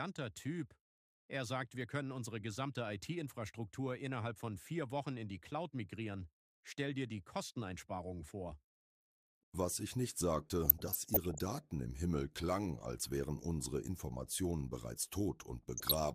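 DAB burbling at 10.65 to 11.39 s and 15.77 to 15.94 s: residual bit errors make sub-bands jump, heard as short noise blips, seen as scattered bright spectrogram blocks.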